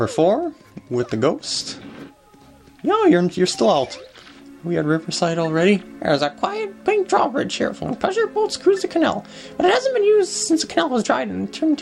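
No technical faults can be heard in this clip.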